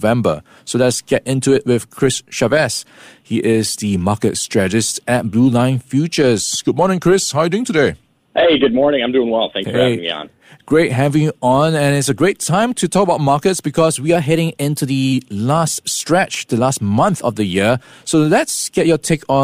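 A speech recording with two drift correction steps: from 6.67 to 8.09 s it slows 5.9% and drops about a semitone (−106 cents), then from 14.16 to 15.13 s speeds up 5.9% and rises 100 cents, each snapping back afterwards, likely clock-matching software abruptly adjusting playback rate.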